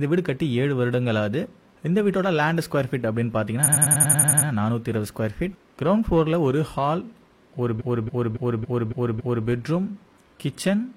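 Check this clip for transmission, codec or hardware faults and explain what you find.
There are two stretches of repeated frames. From 3.63 to 4.46 s, a 93 ms chunk plays again nine times, a quick stutter adding about 0.84 s. From 7.76 to 9.43 s, a longer 279 ms block replays six times, adding about 1.67 s. The same compressed data reached the decoder more than once, so the sound loops in place.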